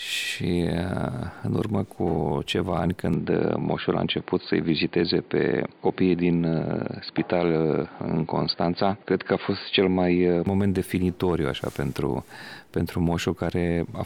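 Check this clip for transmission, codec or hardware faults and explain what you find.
From 3.14 s to 10.47 s the sound turns dull and narrow, with nothing above 4.7 kHz, then clears again. There is no gap at either change, the level holds steady, and a faint new noise floor sits roughly 45 dB down. The likely cause is an input switched to a poorer device partway through, whose narrower band and own noise replace the original path until it returns.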